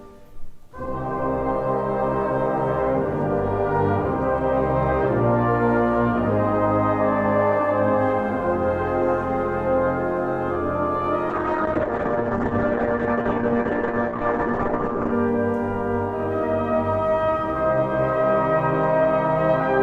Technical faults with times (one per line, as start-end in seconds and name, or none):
11.30-15.19 call bitrate drop